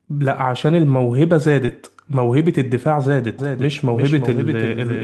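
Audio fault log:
1.65–1.70 s, short concealed packet loss: about 20 ms of audio failed to arrive, and the receiver extended the preceding sound for roughly 24 ms before blending back. This produces a brief smear or wobble rather than a silent dropout, which distinguishes it from a plain gap or a click.
1.68–1.70 s, lost packet rebuilt from error correction: this 20 ms stretch fits a single lost packet recovered from a low-bitrate copy carried in the next one. It plays without a hole but sounds rougher and noisier, unlike the extrapolated fill just before it.
3.38 s to the end, doubled audio track: a second full-band copy of the sound switches in abruptly and runs to the end, around 0.4 s behind and a few dB quieter. It has no decay or room colouring, so it is not a reverberant echo. It is likely from a second, slower capture path or an edit holding two copies out of step.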